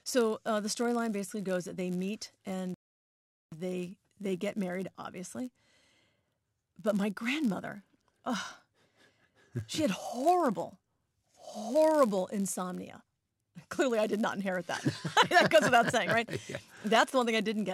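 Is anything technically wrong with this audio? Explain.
Yes, the speech has two faults.

A filter restarted on every block runs for the whole clip. The filter loses its state at each block boundary and starts again from silence, so every block opens with a small transient. This produces a buzz at about 86 Hz, which fits a 512-sample block. The buzz rises and falls with the speech level.

A rebuffering stall runs from 2.74 to 3.52 s, right after "goes that they meet". The player ran out of downloaded audio and waited for more. The sound drops to silence and then picks up exactly where it left off, with "they they get married". No speech is lost, but the stall adds about 0.78 s.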